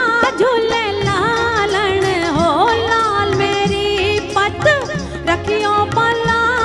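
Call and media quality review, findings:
Nothing stood out on listening; no findings to log for this clip.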